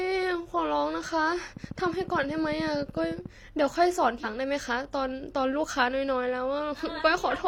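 A train of clicks runs from 1.57 to 3.27 s: about twenty near-identical ticks at a steady 13.6 per second, each peaking a few decibels above the speech, so they poke through both the spoken sound and the gaps between syllables. The even spacing and uniform shape point to a repeating external pulse, likely electrical interference from nearby equipment or a faulty connection or power supply, rather than anything in the recording itself.

Compressed frames are skipped at 4.16 to 4.25 s, where the decoder never plays a run of frames, either because they were missing from the stream or because it rejected them as damaged. The speech lurches forward by roughly 150 ms.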